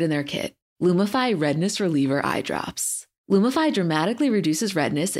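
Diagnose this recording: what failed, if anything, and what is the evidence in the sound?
A clock-matching stage in the buffer path likely made a drift correction step: to rebalance its buffer, it dropped the playback rate in one jump instead of easing it. From 1.38 s to 2.13 s the speech runs about 6% slow and sits 106 cents flat, roughly a semitone, with speed and pitch falling together. At 2.13 s the rate snaps back, so the detuned stretch has an abrupt start and end.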